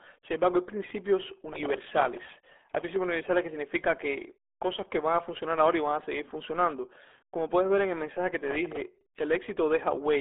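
Throughout, the speech is muffled and gargly, with nothing above about 3.7 kHz. This is the RealAudio 14.4 codec, whose 8 kbit/s coding discards the upper band and smears what remains.

From 1.53 to 3.07 s, after "embargo hay principios" and before "universales que significa", and again from 8.48 to 8.82 s, after "en el mensaje que", a gritty tearing crackle rides on the speech. This is processor overload crackle. Scores of tiny buffer deadlines were missed in a row, roughly a hundred in the first burst and about twenty in the second. Each miss replayed a sliver of old audio with hard edges, which fits buffers of about 1.5 ms.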